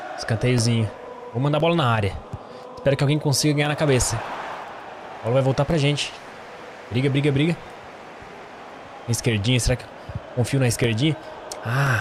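Periodic USB or driver dropouts run from 0.58 s to 11.87 s, recurring every 1.024 s, about ten in all. At each one, something on the system stalls the USB link or audio driver just long enough for roughly 2 ms of audio to go missing, and that gap is filled with silence. The result is a steady, clock-like train of small ticks that are heard only where sound is present.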